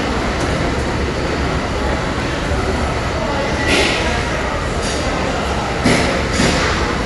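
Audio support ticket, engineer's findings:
Dolby Digital compression damage throughout: dull, band-limited sound, nothing above 11.4 kHz, rough fluttering noise around tonal parts. Likely a low-bitrate AC-3 encode, consistent with 64 kbps. Bit-starved lines refilled with dither noise. Spectrogram: flat ceiling at 11.4 kHz, speckled smearing near tones.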